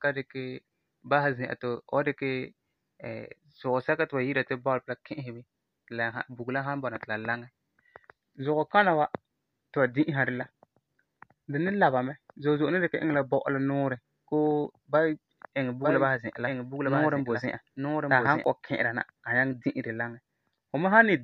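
From 15.82 s to 18.44 s the speech is joined by a doubled audio track: a second, full-band copy trailing about a second behind and some 5 dB quieter, likely from the audio being captured again through a slower path. It sounds like a dry, uncoloured echo talking over itself, cutting in and out abruptly. On a spectrogram the harmonic patterns repeat, shifted right by about a second; the waveform shows superimposed, offset envelopes with hard edges.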